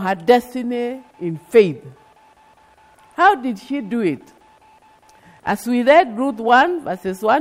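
No technical faults can be heard anywhere in this clip.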